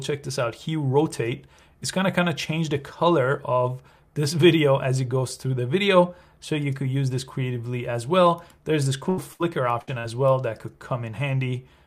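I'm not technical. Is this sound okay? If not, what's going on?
No. Near the end, the sound briefly breaks up a few times.

The first problem is a burst of packet loss. It happens three times: from 9.09 to 9.19 s, from 9.33 to 9.41 s, and from 9.81 to 9.89 s. Each time, a small piece of sound went missing on its way across the network, 80 ms the first time and 60 ms the other two. The receiving end covered each hole by stretching the last sound and fading it. So you hear a short held buzz or fading hiss, then the sound jumps ahead.

The second problem is a short concealed packet loss, from 9.99 to 10.06 s. About 40 ms never arrived in time. The receiver patched it by continuing the sound just before, then blending back in. It comes across as a quick smear or wobble, and a very short sound there may simply disappear.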